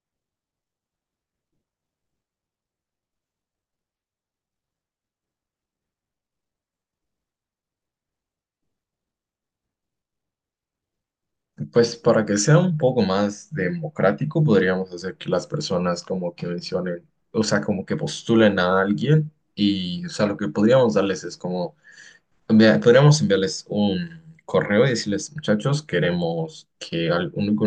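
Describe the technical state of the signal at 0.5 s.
At 0.5 s the speech signal is intact, with no audible technical fault.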